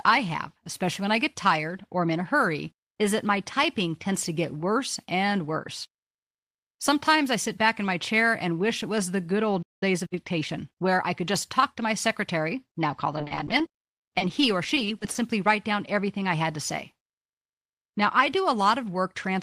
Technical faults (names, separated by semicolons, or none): playback stall; time-compressed catch-up; repeated packet loss (robotic sound)